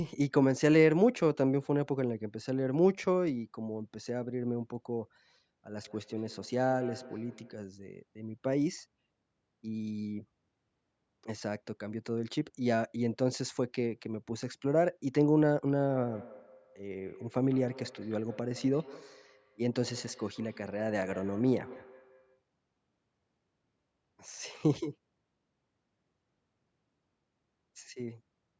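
From 5.8 to 7.69 s and again from 15.74 to 22.44 s you get feedback echo between two devices. A second device in the room is replaying the call, and the first mic picks it back up, and its echo canceller ignores sound it didn't play itself. Each bit of speech returns roughly every 150 ms, thinner and ringier each pass, peaking at about 17 dB below the speech in the first stretch and about 19 dB below in the second.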